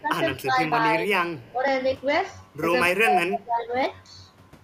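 Right from the start the speech dips under double-talk suppression at 0.01 to 0.21 s, 0.44 to 0.61 s, 0.77 to 1.09 s, 1.51 to 1.71 s and 3.01 to 3.73 s. The level sags by anything from a slight 5 dB or so to a deep 25 dB in that last, longest stretch. The likely cause is an echo canceller that couldn't tell its own talker from the far end and turned both down. Just before that, from 1.4 to 1.51 s, there's an echo leak: a faint copy of the speech roughly 30 dB down, trailing by 238 ms, most likely loudspeaker pickup the canceller didn't fully remove.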